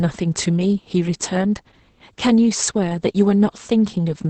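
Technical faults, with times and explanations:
Throughout: Opus voice compression, heavy. The speech sounds muffled, hoarse and faintly robotic, with nothing above about 8.5 kHz, which fits Opus running in its SILK mode at a wideband setting and a very low bitrate near 10 kbps. SILK models each 20 ms frame as a vocal-tract filter driven by an excitation signal. At this rate that excitation is coded so coarsely that the natural breathiness and fine harmonic detail turn rough and buzzy.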